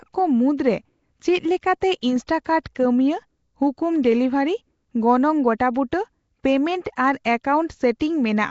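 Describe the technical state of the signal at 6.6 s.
At 6.6 s the speech carries a rough, hissy halo and a smeared, underwater quality, with nothing above about 7.7 kHz, and that holds for the whole clip. It's likely Nellymoser compression, which fits a 32 kbps stream: weak bands got no bits and were filled with noise.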